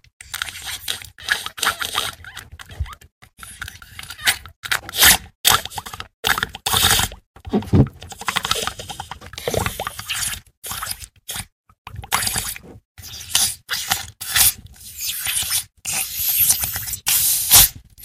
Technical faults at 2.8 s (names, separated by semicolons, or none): hard clipping